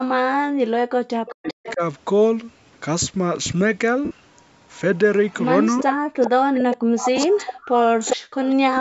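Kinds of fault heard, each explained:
Speech suppressed in double talk: The speech dips by around 40 dB through the first 1.8 s and again from 6.61 to 8.37 s, likely because an echo canceller mistook overlapping talk for echo. Unlike gating, the speech itself is cut.
Echo leak: A delayed copy of the speech trails it by about 0.4 s, briefly near 1.3 to 1.7 s at roughly 15 dB down, then from 4.77 to 8.55 s at roughly 10 dB down, likely leftover loudspeaker pickup. It is a repetition, not a gap.
Lost LE Audio frames: At 4.05 s about 60 ms of audio turns into a noisy smear that fades, and at 7.17 s a shorter 15 ms smear occurs. Both fit a run of lost 7.5 ms frames concealed by the decoder, which sounds unlike a clean cut.
Background gated by the echo canceller: From 5.93 to 6.16 s the room sound drops by about 39 dB for roughly 200 ms while the loudspeaker plays, then returns. It is a brief hole in the background rather than the broken-up speech of double-talk suppression.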